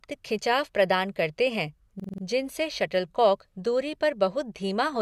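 Speech, with a system hang loop from 2.00 to 2.23 s, right after "खिंचाव प्रदान करते हैं". A 46 ms slice repeats five times at 21.5 Hz, a stutter that fits a 2048-sample buffer replaying.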